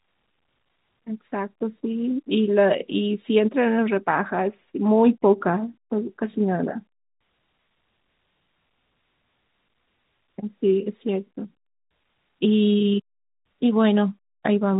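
The speech carries no technical fault, with the G.711 telephone coding audible only as the usual narrow band that stops at about 3.8 kHz.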